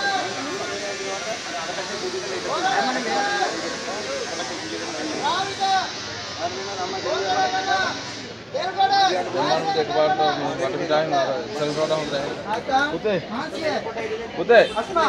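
No technical faults can be heard anywhere in the clip.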